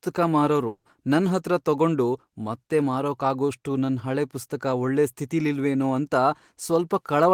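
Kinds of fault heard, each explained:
Long network dropout: from 0.67 to 0.88 s the last sound smears into a fading buzz, then brief silence, likely a stalled stream. A spectrogram shows a blurred, decaying band, then an empty gap, before "ನನ್ಹತ್ರ ತಗೊಂಡು ಮತ್ತೆ ಮಾರಕ್ಕಾಗೋಷ್ಟು" resumes with about 180 ms lost.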